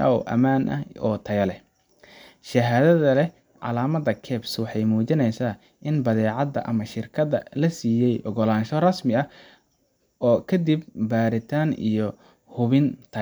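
Speech recording, no technical faults audible anywhere in the clip.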